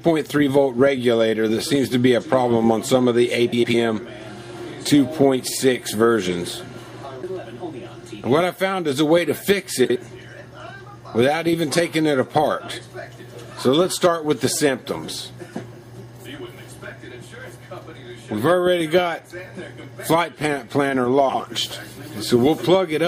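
The whole clip has a watery, swirly treble and smeared attacks, likely from MP3 compression. The damage is plainly audible and points to a low bitrate around 64 kbps. There are frames out of order at 3.52–3.74 s, 9.85–9.96 s and 21.29–21.40 s. In each, two adjacent blocks swap places, about 105 ms each in the first and 52 ms in the others, giving a garbled flutter.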